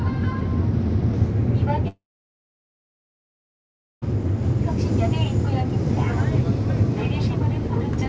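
At 1.88 s the sound cuts out until 4.04 s, likely a long network dropout. A brief continuation of the last sound, a buzz or hiss, fades, then about 2 s of silence follows. The missing stretch never returns. Throughout, nothing sits above 8 kHz, which fits a G.722 call codec.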